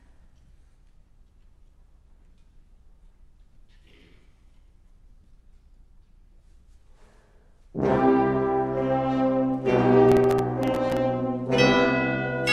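Processor overload crackle from 10.09 to 10.97 s: about fifteen buffers of a millisecond or two miss their deadlines, each replaced by hard-edged stale audio, producing gritty crackle.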